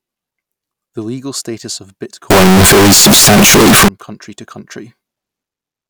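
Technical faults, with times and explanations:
2.30 to 3.88 s, float read as integer: the speech turns very loud and harsh, nearly square at an almost fixed, high level, with background noise as loud as the speech. Pitch still carries. The likely cause is 32-bit float samples being read as 32-bit integers, so sign and exponent bits set the level.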